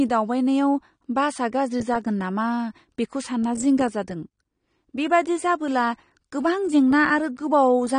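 Throughout, the speech sounds dull and plainly warbling, with nothing above 9.8 kHz, likely from AAC compression at a low bitrate that fits around 32 kbps.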